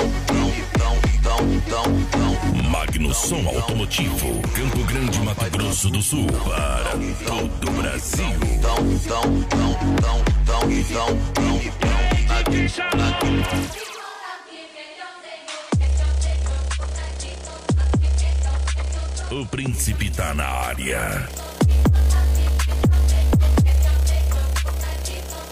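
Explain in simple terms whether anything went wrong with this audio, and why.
Digital radio blending to analogue happens from about 14.36 to 19.79 seconds. The radio lost its digital signal and, over roughly a tenth of a second, faded across to the station's ordinary FM broadcast, then faded back later. During that stretch a faint background hiss appears and the sound gets a little quieter.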